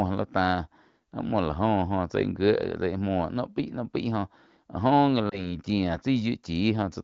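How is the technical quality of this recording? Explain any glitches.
One glitch stands out in this wideband speech, which sounds clear and fits a higher-rate AMR-WB (HD Voice) link. From 5.29 to 5.58 s, lost AMR speech frames, consistent with a single 20 ms frame, cause a brief warbling dip as the decoder repeats earlier settings at falling gain. A spectrogram shows smeared, flattened harmonics and lowered energy, and the waveform shows a short amplitude sag before recovery.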